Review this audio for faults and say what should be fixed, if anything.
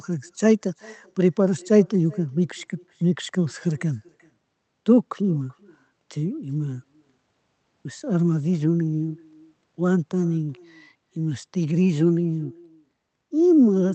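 Echo with no canceller runs through the whole speech clip: the far end is playing the call over a loudspeaker, its microphone is picking that playback up, and nothing is subtracting it before it is sent back. The result is a faint copy of the talker, about 25 dB below the direct speech, trailing each phrase by roughly 0.4 s, sounding thinner, with the whole call held under a roughly 8 kHz band limit. Enabling acoustic echo cancellation at the far end would stop this.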